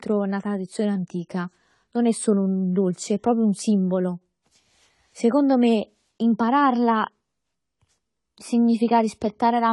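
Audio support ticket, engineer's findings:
Dull, smeared speech with warbling, fizzy sibilants throughout; nothing above 11.5 kHz. Likely AAC compression: low-bitrate AAC-LC, consistent with about 32 kbps, lowering cut-off and coarsely quantising bands.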